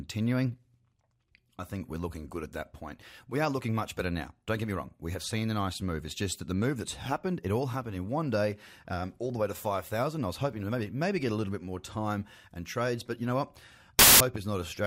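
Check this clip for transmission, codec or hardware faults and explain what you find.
One fault appears near the end of this speech clip. From 13.99 to 14.20 s, just after "but you know what", there are samples built from the wrong bytes: the decoder assembled each sample with its bytes misaligned or swapped, promoting the rapidly fluctuating low-order bits into the dominant part of the value. For that fifth of a second, the speech becomes a blast of loud, harsh broadband noise.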